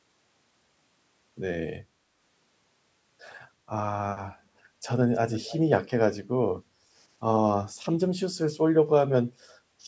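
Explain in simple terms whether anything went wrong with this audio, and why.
From 5.14 to 5.59 s, a faint copy of the speech trails a third of a second behind. This is an echo leak, likely from a loudspeaker the echo canceller didn't fully clean up.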